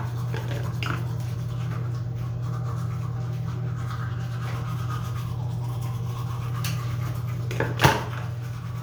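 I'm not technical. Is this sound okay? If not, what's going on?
Yes, nothing in this recording of sounds stood out as a problem when I listened to it.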